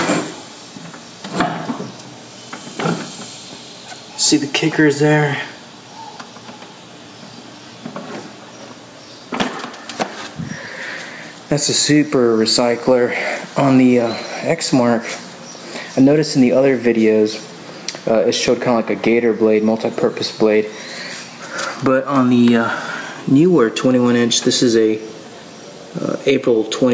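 Throughout the clip there is gain pumping: the input gain was likely set far too high, so a fast limiter keeps clamping down on each loud sound. The gain swings by around 10 dB under loud moments, leaving everything squashed; the call's band limit tops out at 8 kHz.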